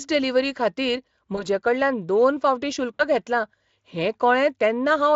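Speech clip with VoIP packet loss concealed by the speech codec. After "डिलिव्हरी खातीर", 1.35–1.47 s, about 20 ms goes missing. After "दोन फावटीं", 2.94–3.04 s, about 60 ms does, before "घेतलां हें". The decoder stretches the last sound into a fading buzzy tone or coloured noise.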